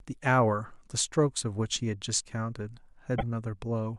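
At 3.18 s the speech jumps ahead. A short disturbance follows and lasts until 3.23 s. The likely cause is a broken MP3 bit reservoir. Frames went missing. The next frames, about 26 ms each, reached back for borrowed data and decoded the wrong bytes.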